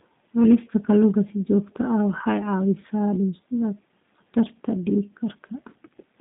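From start to finish the speech sounds narrow, slightly rough and synthetic, with nothing above 3.7 kHz and little below 150 Hz. That is G.729 coding damage, which fits an 8 kbit/s coder rebuilding the voice from a vocal tract filter, a pitch predictor and sparse pulses.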